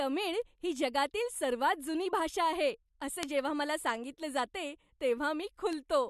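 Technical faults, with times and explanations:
0.76 s, 2.03 s, 3.23 s (just before "जेव्हा मला सांगितलं") and 5.73 s: bit error spike. Each is a single broadband tick, unrelated to the speech, consistent with a flipped bit throwing one to three samples off by a power of two; there's no gap or dropout.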